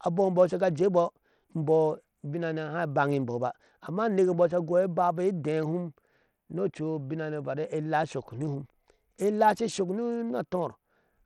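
Bluetooth SBC compression runs through the whole speech clip: the treble thins and flickers, with a gritty, aliased edge riding on the sound. This likely comes from SBC starving its upper sub-bands of bits and coarsely quantising the rest, which fits a low bitrate near 80 kbps.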